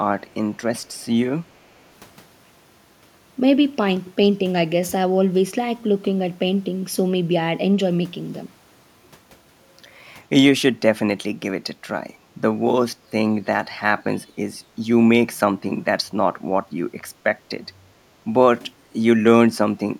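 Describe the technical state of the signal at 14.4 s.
The speech briefly dips by roughly 15 dB from 14.39 to 14.44 s, likely speech suppressed in double talk, where an echo canceller mistook it for echo.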